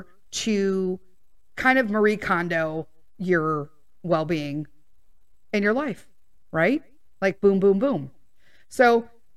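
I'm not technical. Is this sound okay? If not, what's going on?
Yes, nothing stood out as a problem when listening to this recording.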